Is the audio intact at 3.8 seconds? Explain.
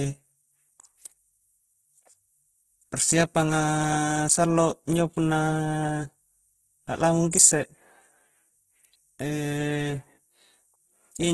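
No. At 3.8 seconds the speech carries Opus compression damage, which runs through the whole clip rather than starting there. The encoder, likely running its CELT music mode at a low rate that fits roughly 12 kbps, keeps each band's energy but has too few bits for detail, so it fills bands with noise or folded copies of lower ones. The result is heavy grainy, rough texture, and nothing sounds above 12.1 kHz.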